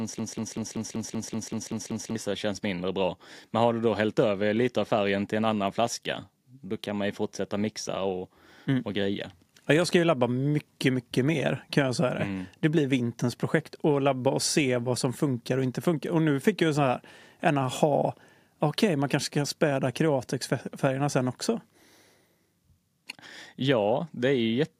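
Speech opening mid broken-record loop: a 0.19 s fragment repeats exactly to 2.16 s, drawing identical tiled blocks on the waveform, likely from a stalled player or stream.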